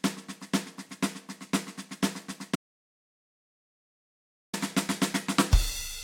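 At 2.55 s the music cuts off abruptly and does not return until 4.53 s, an audio dropout to silence lasting about 1.98 s. The gap is silent, with no room tone or hiss underneath, and the music resumes mid-flow, so that stretch is simply missing. The likely cause is a lost input, with the recorder writing zeros meanwhile. Unlike a fade or a quiet passage, there is no decay and no residual noise.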